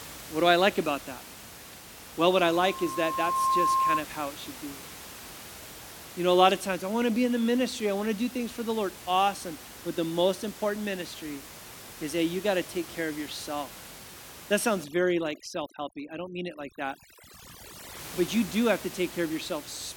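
At 2.36 s a loudspeaker feedback squeal starts. A single tone near 1.1 kHz swells over roughly a second until it sits a bit louder than the speech, then cuts off at 4.05 s, just before "how it should be". What's happening is the mic is hearing the speaker it feeds, and at that one frequency the loop gain tipped past one, so the tone kept feeding itself and grew.

From 14.84 to 17.99 s you get overdone noise removal. The room noise, normally sitting about 17 dB under the speech, drops to an odd near-silence with little twinkly bits. That's a noise reducer pushed too hard, shutting off individual frequency bands whenever they look like noise and dragging the softer parts of the speech down with them.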